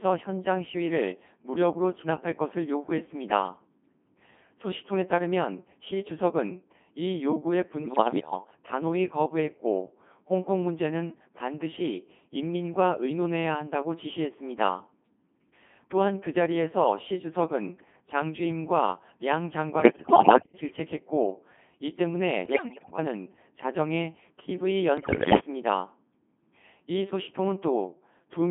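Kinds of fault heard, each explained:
Codec 2 vocoder: A very low-rate vocoder sends only pitch, voicing, energy and spectral envelope, then rebuilds the voice from sine waves rather than the original waveform. Throughout, speech is heavily robotic and buzzy, confined to 200 Hz–3.5 kHz, in the 2.4 kbit/s mode.
bit errors on digital voice radio: Flipped bits corrupt the parameters of whole vocoder frames. Bursts at 7.82–8.32 s, 19.80–20.54 s, 22.46–22.98 s and 24.98–25.40 s jump in pitch, level and tone colour and break into warbling gibberish, the last being the most severe.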